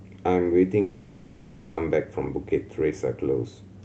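At 0.81 s the speech gives way to a buzzy, smeared continuation of its last sound that fades out rather than stopping. No true silence follows. The speech resumes at 1.79 s with about 0.96 s of it gone, so it picks up mid-flow. This is likely a long network dropout: packets stopped arriving, and the call path's concealment stretched the final sound to fill the gap. Around it, the Opus audio's upper range ends near 8 kHz.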